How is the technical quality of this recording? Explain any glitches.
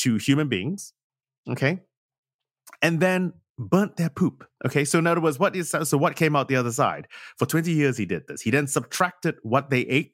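Nothing in the recording stood out as a technical problem on listening.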